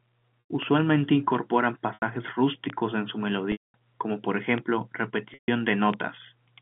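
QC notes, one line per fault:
0.44–0.49 s, 1.94–2.02 s, 3.52–3.74 s, 5.34–5.48 s: packet loss with pitch repetition. About 100, 80, 220 and 140 ms of audio go missing. Each gap is filled by repeating the last pitch period, which sounds like a brief held, buzzy tone that fades out. The longest gap, at 3.52 s, decays into silence before the speech returns with a short cross-fade.
0.63 s, 2.70 s, 4.58 s, 5.94 s: bit error spike. Each event is a single corrupted sample. A flipped bit makes its value jump by a power of two and snap back, which is heard as one sharp, broadband tick unrelated to the speech.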